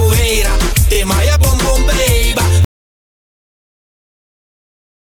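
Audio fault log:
2.65 s to end, audio dropout to silence: the sound stops abruptly mid-flow and what follows is dead digital silence, with no room tone, hiss or decay tail to soften the cut, and nothing returns before the clip ends, so the last 2.5 s or so carry no signal at all. A total drop to silence like this points to the input being lost, most likely through a disconnected device, a failed link or an accidental mute, while the recorder kept writing empty samples.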